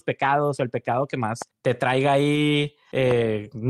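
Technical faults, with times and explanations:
0.91–0.93 s, lost packet rebuilt from error correction: Just after "pecados o el", one 20 ms packet went missing. The next packet carried a low-bitrate copy, so there is no gap, only a brief rougher, noisier patch.
1.42–1.44 s, loud pop: A single sharp pop, about 10 dB above the speech, lands just before "te traiga". The speech continues underneath. A voltage spike from a plug, switch or static is the likely cause.
2.35–2.37 s, lost packet rebuilt from error correction: After "te traiga", another single 20 ms packet was replaced by its coarse backup copy. The sound stays continuous but turns briefly grainy.
3.11–3.13 s, loud pop: One louder pop, about 15 dB above the speech, sits on top of the sound. It is likely a sudden electrical pulse added to the signal.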